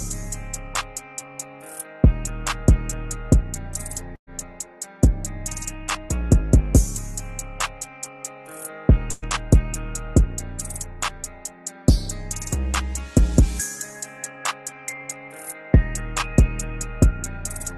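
At 4.15 s and again at 9.11 s, a burst of packet loss left the receiver with no audio for about 120 ms, so it stretched the last sound it had and faded it down. The first gap, to 4.29 s, decays into about 80 ms of silence. The second, to 9.24 s, stays audible as a fading buzz or hiss throughout. Each time, the audio jumps ahead with that stretch missing, and the call codec's top end stops near 12 kHz.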